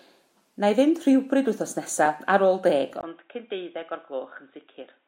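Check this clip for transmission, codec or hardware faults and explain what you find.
One fault here: at 3.01 s the input switched to a poorer device, likely another mic or a headset call profile. After a 20 ms gap, the speech loses everything above 3.8 kHz, drops roughly 10 dB and picks up a faint new noise floor, sounding dull and boxy to the end.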